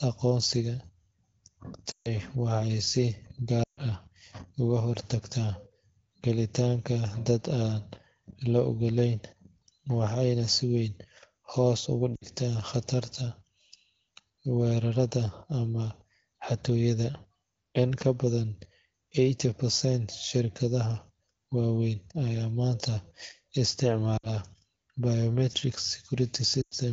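Lost AMR speech frames break up this wideband speech five times: 1.91 to 2.09 s and 3.63 to 3.80 s (140 ms each), 12.15 to 12.26 s just after "si weyn hoos ugu", 24.18 to 24.28 s (60 ms each), and 26.61 to 26.74 s (100 ms). Corrupted frames were replaced by the decoder repeating its last good pitch and vocal-tract settings at falling gain. Unlike a hard packet gap, which is abrupt silence, the sound drops to near silence within two frames, then returns briefly weak and rough. Around these moments the clean HD Voice band fits a rate near 16 kbit/s.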